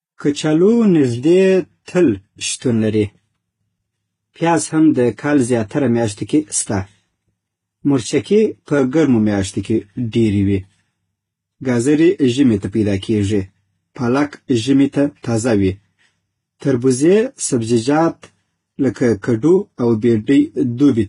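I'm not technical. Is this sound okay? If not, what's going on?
No. Transcoding between lossy codecs, throughout: the speech was likely compressed twice over, so two layers of smearing stack up and nothing above 11.1 kHz remains.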